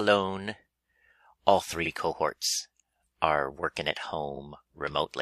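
At 1.81 s a stretch of the compressed stream was delivered twice, so the decoder plays the same 46.4 ms block a second time before moving on, which fits a single compressed frame being duplicated. This is repeated frames: the sound briefly stutters, with a short slice from 1.81 to 1.87 s heard again immediately, and everything after it arrives 46.4 ms later than it should, making the audio that much longer.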